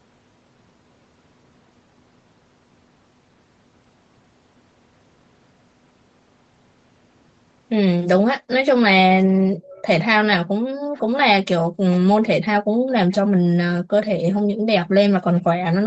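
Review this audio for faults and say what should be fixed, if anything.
An echo leak appears at 9.63–9.84 s, 10.94–11.99 s, 12.89–13.16 s and 15.35–15.42 s: a faint copy of the speech returning about 0.49 s late, roughly 20 to 30 dB below the direct voice. The likely cause is a far-end loudspeaker whose echo canceller let part of the played-back call reach its microphone and sent it back. On a spectrogram it shows as dim, smeared repeats of the preceding harmonic patterns, offset by half a second. Better far-end echo cancellation or a headset there would prevent it.

Background gated by the echo canceller occurs at 10.6–10.93 s, 11.68–11.79 s and 12.66–12.89 s. The room sound drops by up to about 40 dB for about 100 to 300 milliseconds each time while the canceller clamps the microphone during loudspeaker playback. The waveform's noise floor collapses to near-flat, and the spectrogram shows blank vertical gaps. 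Gentler suppression or comfort-noise insertion would prevent these dropouts.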